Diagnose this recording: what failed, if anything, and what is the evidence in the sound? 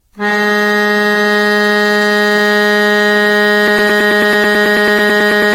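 Repeated lossy coding at the codec stage is the likely cause of the overall texture. The music sounds swirly, smeared and hollow, with blurred attacks and nothing above 16.5 kHz, which fits AAC-LC at around 64 kbit/s. The damage goes beyond what one encode at that rate would leave. That points to generation loss over something like ten passes, each requantising on a shifted frame grid so noise and spectral holes build up.

A playback or stream stall is the likely cause of the broken-record loop from 3.68 s to the end. A fragment of about 0.11 s (109 ms) repeats exactly, back to back, seventeen times. The stage held its last buffer and kept resending it instead of new data. Whatever music should have played in those final seconds is missing, replaced by the same short stutter until the clip stops.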